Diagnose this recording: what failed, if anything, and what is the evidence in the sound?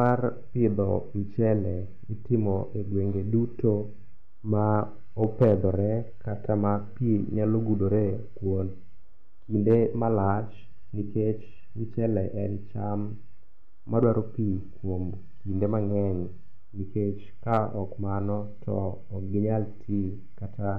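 Brief crackly edges sit on the loudest peaks of the speech at 0.01–0.11, 4.76, 5.24–5.54, 9.70–9.75, 14.03 and 17.53–17.57 s. This is hard clipping: peaks up to about 4 dB over the converter's full scale are cut flat, adding high harmonics.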